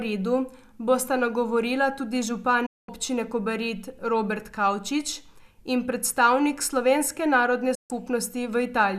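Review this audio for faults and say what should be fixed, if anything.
The speech briefly goes silent twice: a quick fade to nothing from 2.66 to 2.89 s, then again from 7.75 to 7.91 s, just after "in predstavnik slovenske narodne". This is a digital broadcast dropout. The receiver muted on corrupted or missing frames, losing roughly 216 ms and 144 ms of programme. Better reception, stronger signal margin or more robust error protection on the transmission would prevent it.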